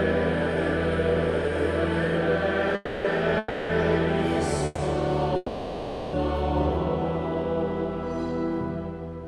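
At 2.75, 3.38, 4.65 and 5.36 s the sound stalls into a fading buzz or hiss drawn from the last sound, lasting 0.29, 0.31, 0.13 and 0.77 s. Each time it then resumes where it stopped, with nothing lost. These are call audio freezes, likely from delayed packets that left the jitter buffer empty.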